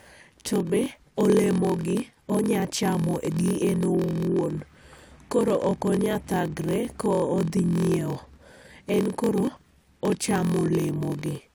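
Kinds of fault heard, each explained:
Block size mismatch (padded): throughout this speech, a buzz at about 43.1 Hz runs under everything, and the talk drags at 0.938 times normal speed while its pitch stays about where it should be. One stage hands over blocks a little shorter than the next stage takes, so each block ends in a short run of zeros. That regular gap makes the buzz, whose rate fits a 1024-sample read block.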